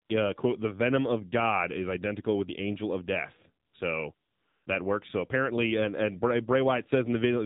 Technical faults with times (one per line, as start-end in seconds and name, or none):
0.00-7.45 AMR narrowband mobile codec
0.06-0.10 AMR comfort noise
3.66-3.74 AMR comfort noise
4.14-4.66 AMR comfort noise